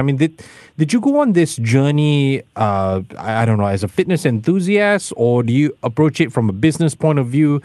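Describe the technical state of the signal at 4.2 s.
At 4.2 s the speech is intact, with no dropout, glitch or distortion, only the ordinary character of a call codec path working as it should.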